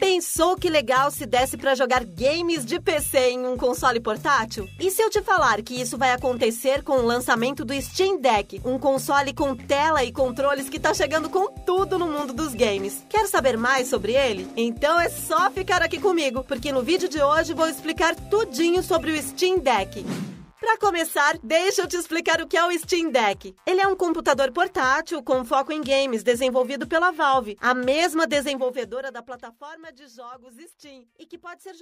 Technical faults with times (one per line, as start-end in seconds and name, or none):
28.36-29.66 zipper noise